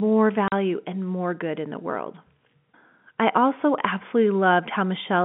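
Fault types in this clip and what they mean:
Packet loss filled with silence: silence replaces lost data, leaving a 40 ms hole at 0.48 s, just before "and more good in", which fits two 20 ms packets. The waveform drops to flat silence, and the spectrogram shows a blank vertical strip with hard edges.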